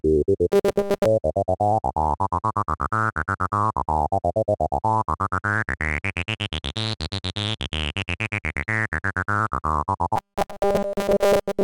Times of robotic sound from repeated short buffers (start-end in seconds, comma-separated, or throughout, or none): 0.52-1.06, 10.16-11.63